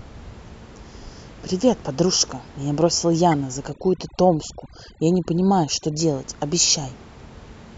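Speech recording with two faults. A compressed frame was damaged and decoded anyway. This is a corrupt frame decoded, covering roughly two frames, which makes a short burst of misplaced energy peaking around -15 dBFS from 3.31 to 3.36 s. From 3.70 to 6.00 s, noise reduction set far too strong strips frequency bands near the estimated noise floor. The room noise, which sits about 22 dB below the speech elsewhere, drops and breaks up into twinkling specks. This is overdone noise removal.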